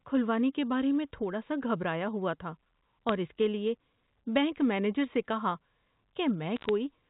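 Bits are being flipped in transit on a digital phone line carrying G.711 A-law at 64 kbps, the source of the bit errors here. Each flipped bit corrupts a single sample, and a hit on the sign or a high-order bit throws that sample far off, producing a sharp tick. The first burst, 3.09 to 3.12 s, falls between "سا گھبرایا ہوا تھا" and "اور اس لیے بینک" as brief crackle. A second, from 6.56 to 6.69 s, is slightly denser, with an error rate of roughly a fifth of a percent.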